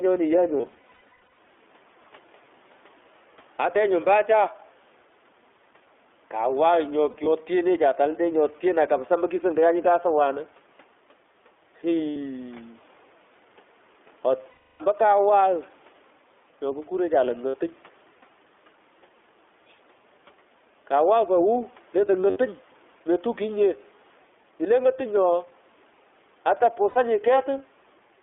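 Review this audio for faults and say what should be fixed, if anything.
Gain pumping runs through the whole clip. The background swells in pauses and ducks by about 5 dB under speech. The likely cause is excessive input gain driving a fast limiter. Lower the microphone gain so the limiter rarely acts.

iLBC codec damage is plainly audible throughout. Speech is limited to about 300 Hz to 3.5 kHz and sounds rough and synthetic. This fits iLBC's 20 ms frames at 15.2 kbps. Use a wideband codec where the link allows.

Lost iLBC frames cause seven dropouts. Each gap is filled with a buzzy, held vowel-like sound. The worst spans 0.58 to 1.38 s, with scattered losses and the longest run near 150 ms. The others are 7.10 to 7.28 s, 12.12 to 12.16 s, 14.50 to 14.82 s, 17.48 to 17.57 s, 22.30 to 22.38 s, and 26.90 to 26.97 s. Speech recovers immediately after each one. Reduce packet loss on the network, or add forward error correction and a larger jitter buffer.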